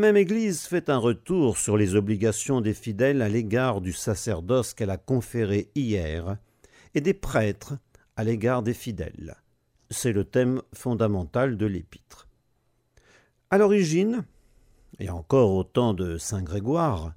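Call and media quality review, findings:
Nothing stood out on listening through this clip.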